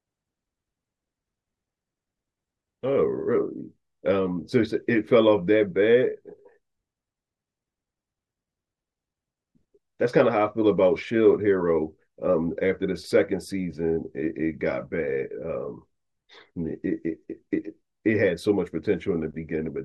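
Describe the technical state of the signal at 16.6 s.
At 16.6 s the speech signal is intact, with no dropout, clipping, distortion or other fault to be heard.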